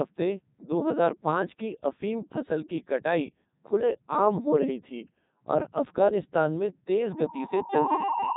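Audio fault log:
Throughout, Codec 2 vocoder: the speech sounds robotic and buzzy, heavily mangled, with nothing above 3.8 kHz. At 3.2 kbit/s only pitch, voicing, energy and a coarse spectral envelope survive, and the decoder rebuilds the voice from sine waves instead of the original waveform.
7.11 to 8.36 s, loudspeaker feedback squeal: a single 917 Hz tone swells over about a second into a squeal that ends up roughly 5 dB above the speech and lasts to the end. A microphone was hearing its own loudspeaker, and the loop gain passed one at that frequency.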